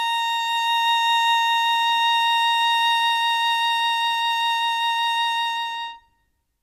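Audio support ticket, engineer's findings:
Music clip reviewed; no faults found. No action required.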